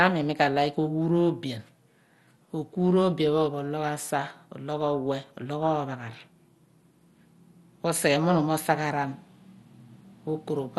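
From start to finish the speech carries the signs of heavy MP2 compression, most likely at a low rate around 64 kbps. The codec's 32 sub-bands are starved of bits, so upper bands drop out and those kept are coarsely quantised. It sounds dull, with a gurgling, granular edge. On a spectrogram nothing appears above 12.2 kHz, and the upper bands below that flicker as patchy blocks rather than smooth energy.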